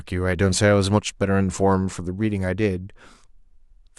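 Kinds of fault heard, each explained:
No technical faults can be heard anywhere in the speech recording, so there is nothing to list.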